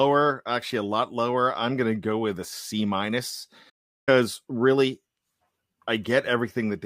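At 3.69 s the speech cuts out abruptly in mid-flow and the output stays silent until 4.09 s, a gap of about 377 ms. This is a playback stall, likely caused by the player running short of data or its thread being blocked, so nothing reached the output until it recovered. Unlike a natural pause, the sound ends without any tailing off, and unlike a brief dropout, the silence lasts long enough to be clearly noticed.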